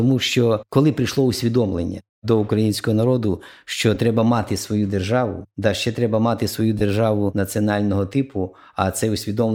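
Speech, with two short dropouts from lost LE Audio frames. The first is at 3.95 s, right after "до українського народу що", and the second runs from 6.79 to 6.81 s, after "ще треба мати свою". They last about 10 ms and 20 ms, which fits one and then two 10 ms frames going missing. The LC3 decoder fills each gap by repeating the last spectrum with scrambled signs, so the voice briefly turns into a smeared, noisy blip instead of a clean gap.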